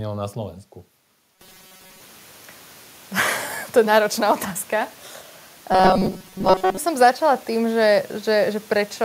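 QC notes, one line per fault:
1.36–2.02 s, 5.72–6.78 s: robotic sound from repeated short buffers; speech becomes a rigid 188 Hz buzz, likely one 5.3 ms chunk looping. Spectrogram: flat, evenly spaced harmonics.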